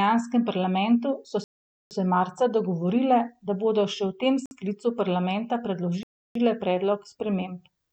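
The speech drops to silence three times: 1.44 to 1.91 s (0.47 s), 4.46 to 4.51 s (53 ms), and 6.03 to 6.36 s (0.32 s). Each gap is likely a Bluetooth stall, with interference delaying packets until the headphone buffer emptied and playback paused.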